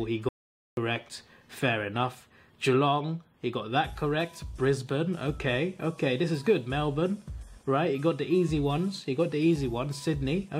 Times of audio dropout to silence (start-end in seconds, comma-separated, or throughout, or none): 0.29-0.77